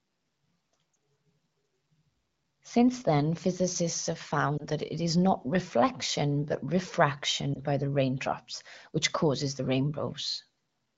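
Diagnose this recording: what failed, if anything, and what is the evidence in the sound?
Network stage: lost AMR speech frames. The decoder repeated the last good settings at fading gain, giving brief warbling dips at 0.93 s, 4.58 to 4.65 s and 7.54 to 7.60 s, each suggesting a single 20 ms frame.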